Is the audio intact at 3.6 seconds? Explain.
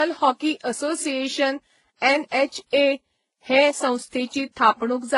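No. At 3.6 seconds, as across the whole clip, the speech carries artefacts of transcoding between lossy codecs, likely an earlier low-bitrate pass re-encoded twice more, finishing as Vorbis. Each later encoder spent bits on the previous artefacts and added its own, so different artefacts stack. Nothing sounds above about 11.1 kHz, the lowest cut-off in the chain.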